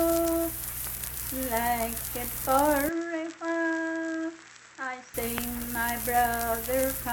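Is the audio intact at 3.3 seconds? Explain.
No. From 2.89 to 5.14 s the audio likely comes from a poorer input device, switched in mid-recording. At 3.3 s the sound is narrower in band, with nothing above 7.9 kHz, so it turns duller and boxier. It is also about 10 dB quieter and carries a different background noise roughly 40 dB below the signal. The change happens abruptly, with no silence at the switch, and the fuller sound returns at 5.14 s.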